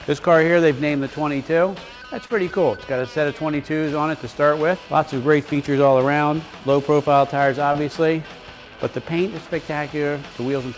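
Brief smears occur at 2.26–2.31 s, 5.53–5.57 s and 7.73–7.77 s, the sound wobbling before settling back. These are short concealed packet losses. About 40 ms of audio failed to arrive in time at the first point and about 20 ms at the others. The receiver extended the preceding sound to bridge each gap, then crossfaded into the real signal. Across the band-limited call path, nothing sounds above 8 kHz.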